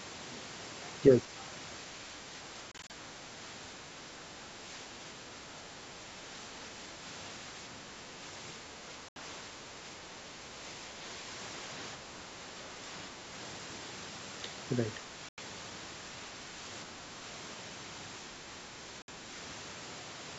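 Speech suppressed in double talk, from 1.08 to 2.43 s: the speech dips by about 5 dB in brief patches adding up to roughly a third of a second. The likely cause is an echo canceller that couldn't tell this talker from the far side's echo and turned both down.

Bluetooth dropouts follow: several short silent holes scattered across 2.72 to 2.91 s, about 91 ms lost in all and none longer than 31 ms. Further dropouts follow at 9.09 s (76 ms), 15.29 s (91 ms) and 19.02 s (61 ms). In each, the speech resumes further along, as if it had played on. Packets likely missed their delivery deadline to the headphones.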